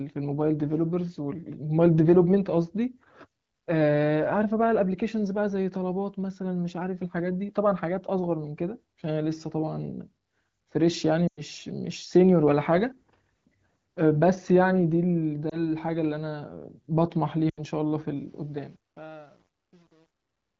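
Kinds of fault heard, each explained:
Lost AMR speech frames: The wideband decoder rebuilt missing frames from the last good pitch and vocal tract settings while lowering the gain. At 11.28–11.41 s a run of about 100 ms drops the sound to near silence within two frames. There is a short warble at 15.50–15.60 s and a dip of about 80 ms at 17.50–17.60 s, each followed by a weak, rough return. Unlike a dropout, the gaps are smeared continuations rather than hard silence.
Truncation distortion on a fade: The level stage feeding the smooth fade-out, which runs from about 18 s to the end, kept too few bits and added no dither. The sound points to about 9 bits. From 18.16 s the quiet tail turns grainy, and from 18.67 s to the end it is at its grittiest. It differs from frame loss because it follows the falling level steadily instead of hitting brief isolated spots.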